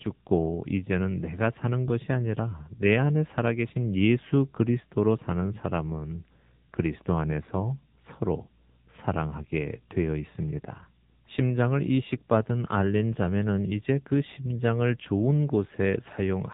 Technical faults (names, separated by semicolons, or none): AMR narrowband mobile codec